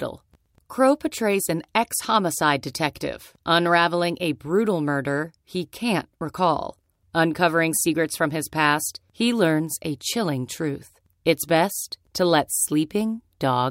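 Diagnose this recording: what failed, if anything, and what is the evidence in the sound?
Nothing in the recording points to a failure at any stage of the chain. The speech comes through with no audible event that would mark a problem.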